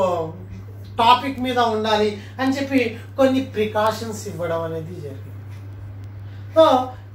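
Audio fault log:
0.14–7.13 s, word clock ticks: a steady train of sharp little ticks, roughly every 0.15 s, around fifty of them, some louder than others. The receiving end is free-running on its own clock instead of locking to the digital link, and the two disagree by something like 150 ppm. Each time they slip past each other, a few samples get misread and a single sample is dropped or doubled, and that glitch is the tick.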